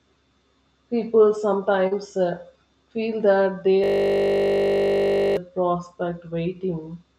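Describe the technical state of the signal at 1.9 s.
A brief smear from 1.87 to 1.93 s is short concealed packet loss: about 40 ms never arrived, so the decoder extended the preceding sound and blended back.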